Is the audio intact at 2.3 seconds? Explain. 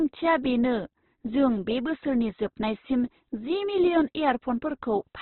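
No, at 2.3 s the speech is band-limited, with nothing above 4.2 kHz, and sounds rough and grainy. That's likely heavy Opus compression at a very low rate, around 12 kbps. Starved of bits, the encoder fills bands with folded or noise-like content, and the damage runs through the whole clip.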